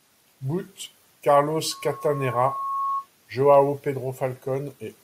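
A microphone is picking up the loudspeaker it drives, and from 1.71 s to 3.07 s the loop gain climbs past unity at 1.1 kHz, producing loudspeaker feedback squeal. That single frequency reinforces itself on each trip around the loop, so a pure tone rises out of the speech over about a second into a sustained whistle. It sits only around 5 dB below the speech level, competing with it until it stops.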